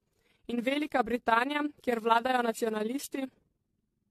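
Speech, with two faults present throughout. The first is overlap-add ripple. The level pulses by about 11 dB at roughly 20 Hz, a steady fast flutter locked to the frame rate rather than the irregular dips of dropouts. The second is generation loss. Swirling, hollow smearing with blurred attacks and nothing above 13.9 kHz is likely the result of about ten AAC-LC passes at 64 kbit/s, which is far more damage than a single encode would leave.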